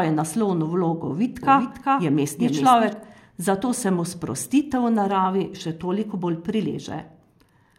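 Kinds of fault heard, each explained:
Doubled audio track: From 1.43 to 2.93 s the speech is heard twice. A second full-band copy trails by roughly 0.4 s, about 5 dB quieter, with no room colour. It cuts in and out abruptly. A slower second capture path is the likely cause.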